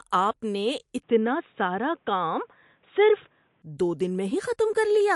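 The whole clip carries plainly audible MP3 compression damage, likely from a low-bitrate encode. Nothing gets through above 11.3 kHz, and weak detail flickers in and out, giving a watery, swirly edge to the speech. That fits something around 52 kbps.

From 1.03 to 3.62 s it sounds as if the input switched to a poorer device, likely a different mic. The band narrows to nothing above 3.8 kHz, so the sound goes dull and boxy. The switch has no gap and no real level jump, and a new noise floor sits roughly 45 dB down.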